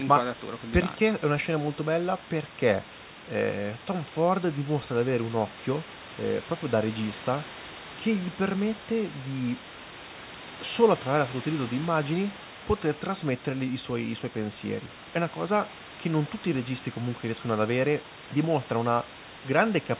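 No technical faults can be heard in the speech: the room's background noise sits about 18 dB below the voice, with a quieter layer about 36 dB below, and the band stops at 4 kHz, which fits a G.711 mu-law call path at 64 kbps.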